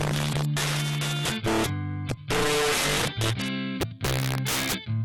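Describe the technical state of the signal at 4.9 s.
At 4.9 s the signal suffers integer overflow, present across the whole clip. Driven about 11 dB too hot, peaks wrap to the opposite sign instead of limiting, affecting roughly 7% of samples. Expect violent cracks, abrupt sign flips across the range on the waveform, and broadband vertical streaks on a spectrogram.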